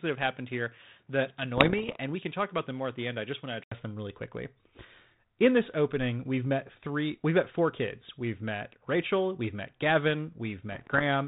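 From the start to 3.72 s the speech is dull and boxy. This is the input switched to a poorer device, likely a headset or a second microphone. Nothing above 3.8 kHz gets through. The level sits about 5 dB lower, with its own faint noise floor roughly 40 dB below the speech. At 3.72 s an 80 ms silence marks the switch back. Then "them really quickly" arrives clear and fuller.

From 1.57 to 1.96 s, inside that dull stretch, come bit errors on an ADPCM link. Around one percent of bits are flipped. Each wrong bit throws off the decoder's step size and prediction, so the damage rings on briefly. The result is pops and rough bursts with level jumps. The same fault returns from 10.72 to 11.03 s at a somewhat higher rate. It is heard over the 32 kbit/s G.726 coding, which does only light damage.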